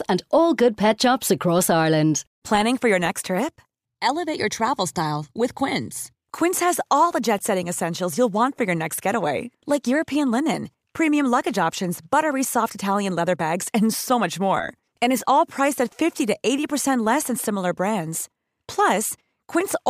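No technical faults are audible.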